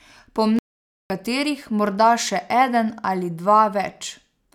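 At 0.59 s the speech cuts out in mid-flow and stays silent for about 0.51 s before resuming at 1.1 s, a playback stall most likely caused by the player running short of data. On a waveform and spectrogram this shows as a flat, empty gap with abrupt edges.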